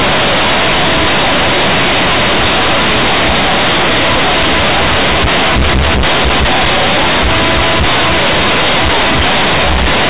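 From start to finish, companded audio read as linear: A-law bytes are played as raw 8-bit samples without expansion. The speech becomes a harsh, loud buzz, and unlike ordinary clipping, even the pauses roar with strong noise.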